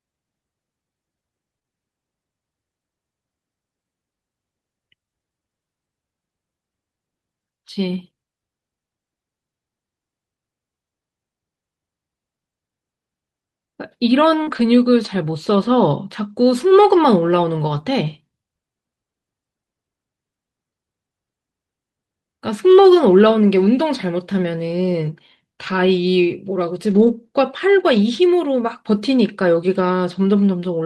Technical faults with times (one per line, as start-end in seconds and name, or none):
1.59-1.73 short concealed packet loss
14.43-14.49 short concealed packet loss
14.47-14.61 lost packet rebuilt from error correction
17.75 lost packet rebuilt from error correction
23.11-23.13 lost packet rebuilt from error correction
25.67 lost packet rebuilt from error correction
26.91-27.09 lost packet rebuilt from error correction